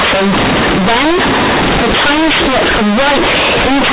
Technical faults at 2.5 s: companded audio read as linear

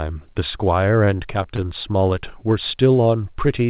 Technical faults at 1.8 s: repeated stalls (stutter)

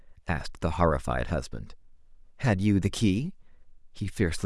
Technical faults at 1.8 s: none

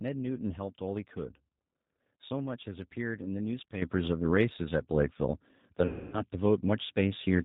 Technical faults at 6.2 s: G.729 codec; sudden gain jump; VoIP packet loss concealed by the speech codec

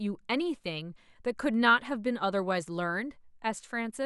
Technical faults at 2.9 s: none

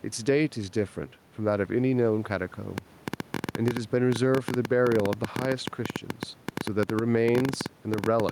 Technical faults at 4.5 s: gain pumping; train of clicks

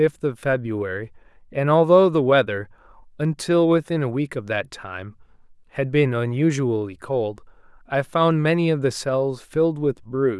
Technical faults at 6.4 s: none

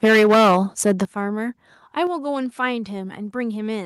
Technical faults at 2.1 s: microphone volume stepped down

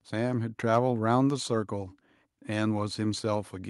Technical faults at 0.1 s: none

